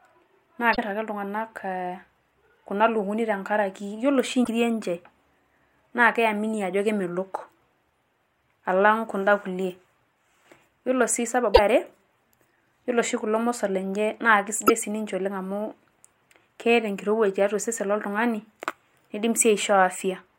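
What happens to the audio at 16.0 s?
Nothing goes wrong at 16.0 s; the speech continues there without any audible fault.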